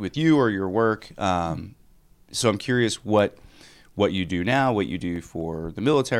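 Just after "so I'm curious", a run of eleven short, regular ticks sounds from 3.19 to 5.65 s, about four or five a second, each a few milliseconds at most. These are CD scratch ticks: a blemish on the disc corrupted more data than error correction could rebuild on each turn, so the player patched over the damaged samples.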